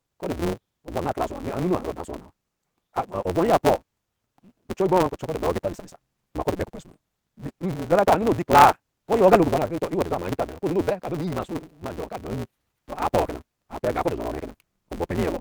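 A block size mismatch runs through this speech clip: each block's tail is truncated, leaving a buzz near 172 Hz and speech hurried 1.88 times, timbre roughly unchanged, which fits 256-sample reads.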